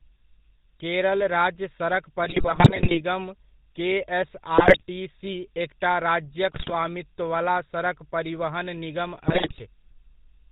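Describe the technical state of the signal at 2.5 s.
Corrupted bits from a weak GSM link are reaching the speech decoder from 2.24 to 3.01 s, just after "केरल राज्य सड़क". Damaged filter, pitch and gain values distort each affected frame, so at 2.5 s the speech breaks into squawks, pops and gargling bursts with erratic level jumps.

The speech has also passed through the GSM full-rate codec, which fits its 13 kbps mode. The codec rebuilds the voice from a vocal-tract model excited by sparse, regularly spaced pulses, discarding everything above 4 kHz. The result is a dull, band-limited voice with a plainly audible buzzy, gravelly roughness.

A switching power supply adds a high whistle between about 8.9 and 9.3 kHz, roughly 25 dB below the speech. Its pitch wanders within that band instead of holding steady.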